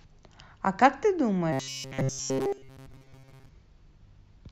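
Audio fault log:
1.53–3.49 s: robotic sound from repeated short buffers. The speech becomes a rigid metallic buzz locked at 133 Hz. That pitch fits a 7.5 ms slice replayed over and over, likely because audio arrived too seldom. Most of the real sound is skipped.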